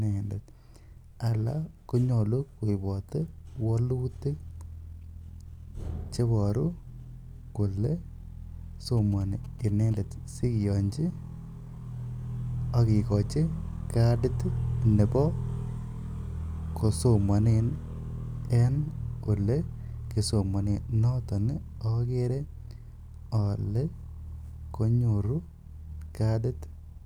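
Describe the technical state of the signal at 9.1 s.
A nearby 2G phone sending signalling bursts gets rectified by the audio circuit from 8.97 to 9.93 s. The result is GSM signalling bursts: a galloping dit-dit-dit of short 217 Hz buzzes, roughly 25 dB below the speech.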